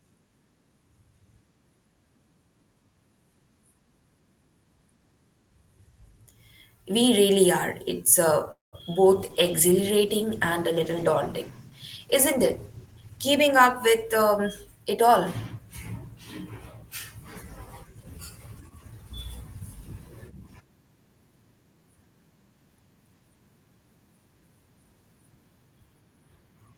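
At 8.51 s packets were likely held up in transit and the jitter buffer ran dry, producing a call audio freeze until 8.75 s. The last sound stretches into a brief fading buzz, then about 170 ms of silence, and the speech resumes where it stopped, shifted later by about 0.21 s with nothing lost.

Shortly after, two bits of short concealed packet loss follow, at 8.79–8.81 s and 8.93–8.96 s. In each, 20 ms of audio never reached the decoder, and the receiver papered over the hole by extending the preceding sound. Each one comes through as a quick smear or wobble in the speech.

From 9.12 s to 14.85 s the call's bandwidth estimate fell, and the Opus encoder was pushed from 32 kbps down to 14 kbps, staying at the lowest rate for about 3.8 s. This call bitrate drop leaves the speech rougher and more watery than the surrounding audio.

Overlapping that, from 12.91 s to 15.09 s, the jitter buffer held more audio than its target and began trimming pitch-period slices, removing roughly a fifth of a second in total. 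This jitter buffer speed-up makes the speech run about 9% faster at unchanged pitch, so it sounds hurried.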